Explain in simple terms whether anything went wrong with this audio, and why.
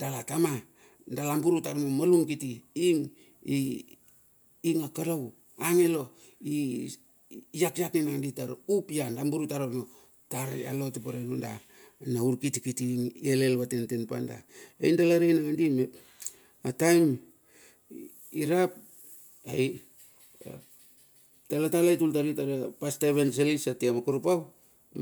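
Nothing went wrong with this audio, because none of the speech has any fault that a listener can hear.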